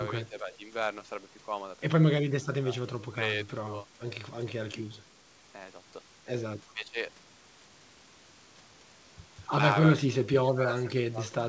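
From 6.64 to 6.96 s the speech dips by roughly 20 dB, and from 9.9 to 11.34 s it sinks further, around 25 dB. This is likely speech suppressed in double talk, with the echo canceller ducking the near talker, not abrupt packet-loss gaps.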